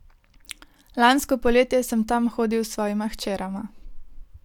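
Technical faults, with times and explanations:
No technical faults are audible anywhere in the recording; the speech signal stays intact and continuous from its first moment to its last.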